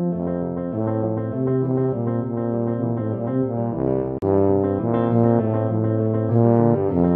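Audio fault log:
4.18 to 4.22 s, CD skip: a tick and a brief dropout of about 40 ms, after which the audio picks up from a different point rather than where it left off. The laser was knocked off its track, or thrown by a flaw on the disc surface, and landed on another turn of the spiral. The player muted while it relocked, and the jump of one or more revolutions is why the continuation no longer lines up.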